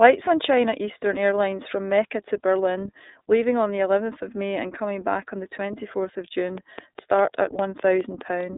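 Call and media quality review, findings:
iLBC codec across the whole speech clip. Narrowband path, nothing above 3.8 kHz, line band about 250 Hz to 3.7 kHz. Each 30 ms frame is coded independently, which fits the 13.33 kbps mode. Plainly audible rough, synthetic edge and muffled, thin tone.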